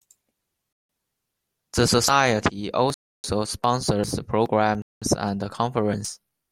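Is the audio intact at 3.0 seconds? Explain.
No. At 3.0 seconds the speech is inside a Bluetooth stall that runs from 2.94 to 3.24 s. The sound drops abruptly to full silence for about 0.3 s and then resumes. The likely cause is radio interference delaying packets on the wireless link, so the headphones' receive buffer emptied and playback halted until the delayed or retransmitted packets arrived and refilled it.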